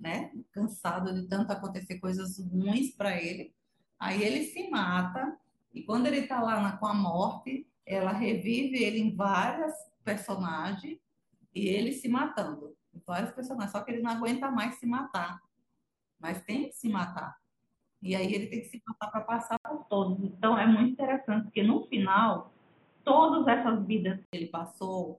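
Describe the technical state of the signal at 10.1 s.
At 10.1 s the signal is intact, with no audible fault.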